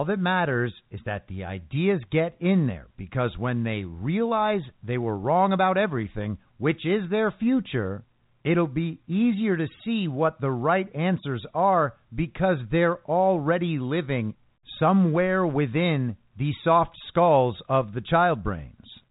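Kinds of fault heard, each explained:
Nothing in this one to flag, just speech coming over an ordinary telephone line, with the top end stopping at 3.8 kHz as you'd expect.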